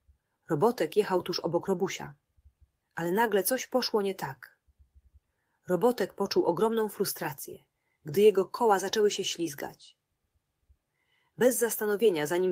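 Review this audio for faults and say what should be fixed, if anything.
Nothing in this audio needs to be fixed, as the review finds no faults.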